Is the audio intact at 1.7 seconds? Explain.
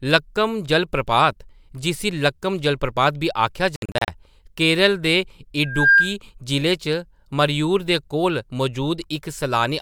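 Yes, the audio is intact at 1.7 seconds, with no fault audible at that moment.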